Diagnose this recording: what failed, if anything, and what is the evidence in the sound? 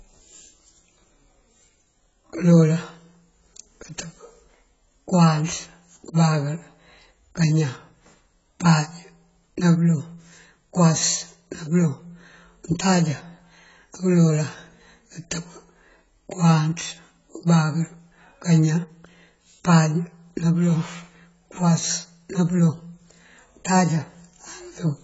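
The speech has a codec fault throughout, most likely AAC compression at a low bitrate in the codec stage. Nothing is present above 7.7 kHz, and the damage is heavy: sibilants and sustained sounds come out dull and smeared, with a watery, warbling texture. That fits an AAC-LC encoder running at around 16 kbps, lowering its cut-off and coarsely quantising what remains. A simple low-pass filter or narrowband line would lose the top end cleanly, without this warble.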